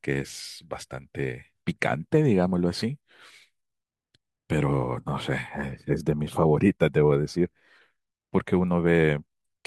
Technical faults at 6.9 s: none

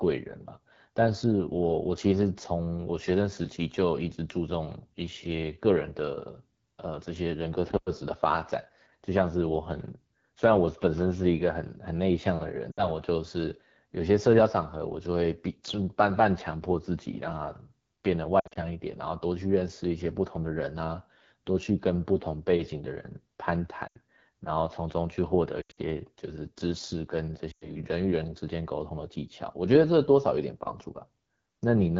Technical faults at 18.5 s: AMR wideband (HD Voice) codec; lost AMR speech frames

